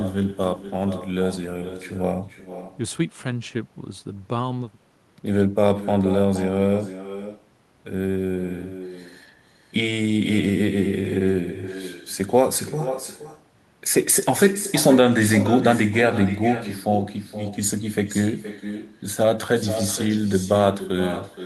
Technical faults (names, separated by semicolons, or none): echo with no canceller